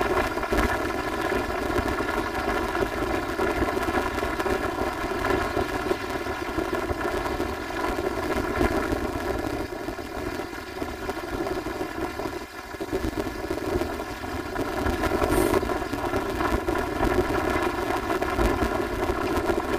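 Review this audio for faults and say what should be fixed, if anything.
The whole clip has a robotic buzz at about 172 Hz, with no clear octave shift. This is planar audio read as interleaved. Each short block stores all its left samples, then all its right samples. The reader treats them as alternating left-right pairs. So each 5.8 ms block plays twice at double speed, left half then right half. The block boundaries repeat 172 times a second, which fits a 256-sample block. To prevent it, match the reader's channel layout to the planar format the source delivers.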